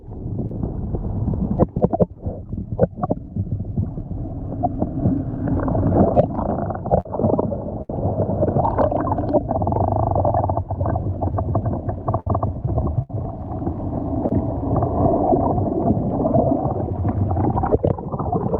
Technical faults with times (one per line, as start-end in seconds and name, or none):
0.48-0.51 short concealed packet loss
2.90 short concealed packet loss
7.00-7.06 burst of packet loss
7.82-8.03 burst of packet loss
12.20-12.27 burst of packet loss
13.02-13.10 burst of packet loss
14.28-14.31 short concealed packet loss